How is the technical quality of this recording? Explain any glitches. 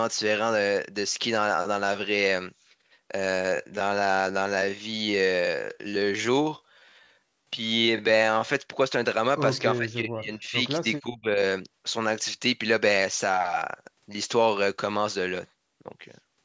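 The recording has two clear glitches: a slowed stretch of speech and two brief dropouts where the speech is pulled down.

From 3.29 to 8.53 s the speech drags at about 0.67 times normal pace with unchanged pitch. This is likely a time-stretched section, where software lengthened the audio by repeating short slices.

From 9.79 to 10.62 s and again from 10.97 to 11.39 s, the speech sinks by up to about 20 dB. That suggests speech suppressed in double talk, where an echo canceller, confused by simultaneous talk from the far side, attenuated the near talker along with the echo. The call microphone processing, which takes out the lowest bass, is expected.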